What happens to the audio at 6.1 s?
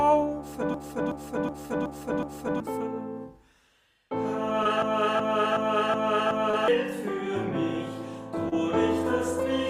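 At 6.1 s the audio is inside a system hang loop from 4.82 to 6.68 s: the driver froze while the hardware replayed one 0.37 s ring buffer, which fits a 16384-sample buffer. It repeats exactly, a 2.7 Hz machine-gun stutter, rather than falling silent as a dropout would. About two seconds of new audio never arrive.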